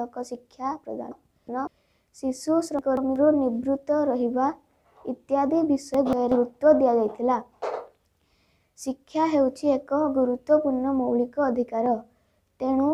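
At 1.12–1.67 s, 2.79–3.16 s and 5.94–6.32 s, chunks out of order jumble the sound: a roughly 186 ms block plays two slots late in the first, one late in the others, with three hard joins, visible as abrupt waveform and spectrogram discontinuities.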